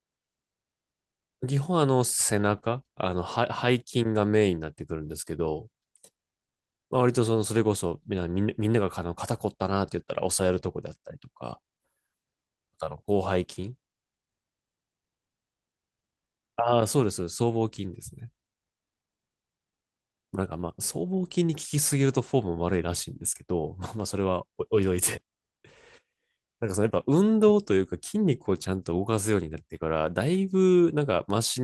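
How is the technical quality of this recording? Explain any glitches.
The recording has no technical glitches to explain. Nothing in the signal chain draws attention to itself at any point in the speech.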